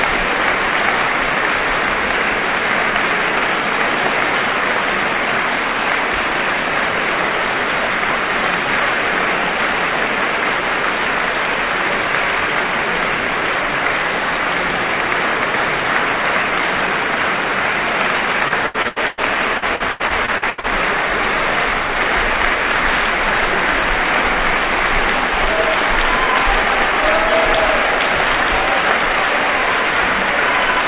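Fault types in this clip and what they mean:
Repeated packet loss (robotic sound): Packets went missing again and again, and each hole was patched by stretching the last bit of sound. It happens in two bursts, 18.48 to 19.20 s and 19.58 to 20.66 s. The first has five holes totalling 300 ms, the longest 95 ms, so 41% of that span is patched. The second has eight holes totalling 360 ms, about a third of the span. The sound turns choppy, cut off above 4 kHz by the G.711 call codec.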